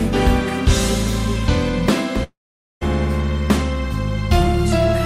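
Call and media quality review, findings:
Long network dropout, 2.23 to 2.83 s. Last sound smeared into a fading buzz, then about 0.47 s of flat silence, then audio picks up further on with roughly 0.58 s gone. Likely packet loss on the network path, receiver concealment papering over the gap.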